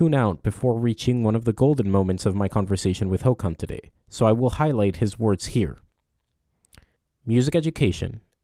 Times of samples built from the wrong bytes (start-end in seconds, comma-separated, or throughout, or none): none